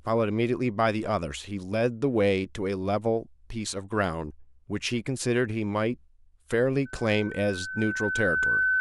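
A microphone picking up its own loudspeaker drives this speech recording into loudspeaker feedback squeal: from 6.85 s to the end at 8.81 s, a 1.5 kHz tone swells over about a second and a half until it is louder than the speech.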